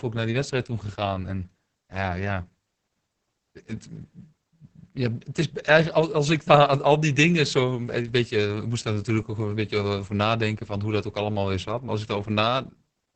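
Opus voice compression is heard throughout the speech. Nothing survives above 8.6 kHz, and the linear-prediction coding makes the voice hoarse and faintly robotic, which fits SILK at around 10 kbps. Unlike a plain low-pass filter, it coarsens the voice's texture itself.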